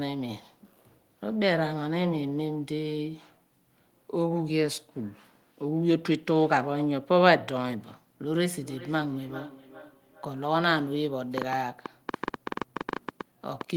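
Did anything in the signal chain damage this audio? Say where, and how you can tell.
Yes. From 8.36 to 10.48 s, feedback echo between two devices appears at the call-processing stage: another device's playback re-enters the microphone, so the speech returns roughly every 400 ms, about 18 dB down. A spectrogram shows fainter, thinner stacked copies.

From 11.38 to 13.76 s, a train of clicks, likely interference on the analogue wiring, ticks unevenly about 10 times per second, well above the signal. On the waveform, these are sharp vertical spikes.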